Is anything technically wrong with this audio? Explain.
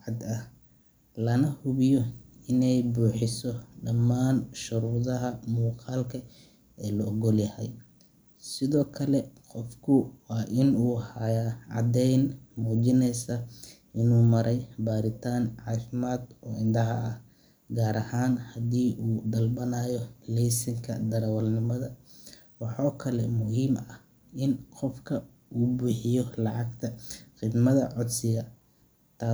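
No, nothing technically wrong turns up anywhere in this speech recording, so there's nothing here to flag.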